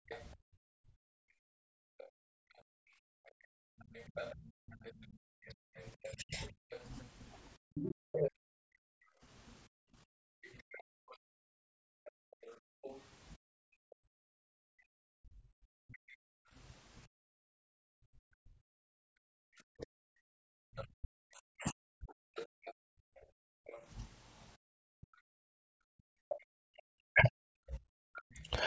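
A speech recording made over a call. The talker's voice dips and breaks up in places from 0.0 to 28.49 s, by as much as about 40 dB and for roughly seven seconds in total. This is speech suppressed in double talk, likely because the echo canceller turned down both voices while the far end spoke. A second voice comes through from 0.08 to 16.15 s, around 10 dB under the talker, and again from 20.76 to 28.49 s, around 15 dB under. That is likely the other side's voice leaking through from the loudspeaker, which the canceller did not fully remove. The room sound also drops out from 2.09 to 3.78 s, 9.68 to 18.44 s and 24.57 to 25.45 s, by about 39 to 40 dB. This is background gated by the echo canceller, which pulled the microphone down while the loudspeaker played. The call's microphone processing leaves nothing above 8 kHz.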